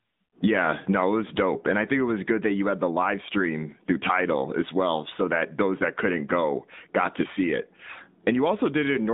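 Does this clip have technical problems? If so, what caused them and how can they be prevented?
Yes. The whole clip carries plainly audible AMR narrowband mobile codec damage. The voice sits in a band from about 150 Hz to 3.7 kHz, with nothing above. A low-bitrate vocal-tract model rebuilds each frame, so it sounds buzzy and synthetic. The sound fits a mid-range mode near 10.2 kbps. To prevent it, carry the call over a wideband or higher-quality codec path.

From 7.92 to 7.97 s there is a short dip and warble. These are lost AMR speech frames. Radio errors corrupted the frames, so the decoder repeated its last good settings at falling gain. The gap fits two lost 20 ms frames. Stronger radio coverage or error protection prevents it.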